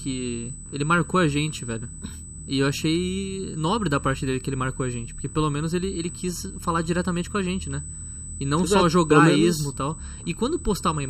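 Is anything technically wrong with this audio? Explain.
Yes, two faults run through the whole clip.

USB whine: a fixed tone at 8 kHz, strongest at its 16 kHz harmonic and roughly 15 dB below the audio, from USB microframe current leaking through power or ground.

Channel delay (comb filtering): one channel lags by about 0.7 ms before the mono sum, cancelling evenly spaced frequencies from around 700 Hz upward, so the sound is hollow and phasey.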